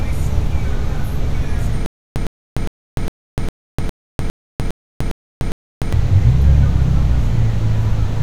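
A recording of sounds with a stutter with silent gaps from 1.86 to 5.93 s: a 108 ms fragment repeats 10 times, each followed by 298 ms of digital silence, giving a steady 406 ms cycle. The likely cause is a stalled player or stream replaying its last buffer between retries, so the audio for that span is lost.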